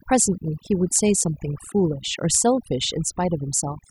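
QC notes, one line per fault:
throughout, overdone noise removal: noise reduction set too aggressively clamps individual frequency bands whenever they sit near the estimated noise floor, taking low-level speech detail with them, so the background drops and breaks up into twinkling specks.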